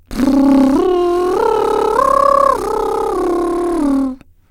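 Music clip, no technical faults heard anywhere in it.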